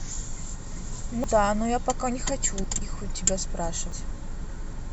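A speech clip with three abrupt skips, at 1.24 s, 2.64 s and 3.92 s, each heard as the sound jumping forward. The first and last lose around a tenth of a second, the middle one less than half that. This is likely a dropped buffer (overrun), where samples were overwritten before being read. Unlike an underrun, no silent gap is inserted; the two sides simply butt together.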